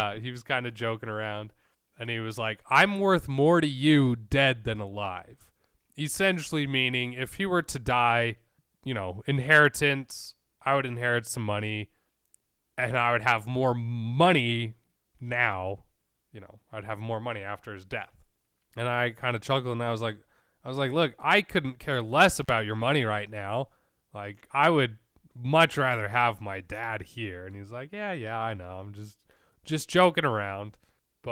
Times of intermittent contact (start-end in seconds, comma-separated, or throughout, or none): 22.42-22.49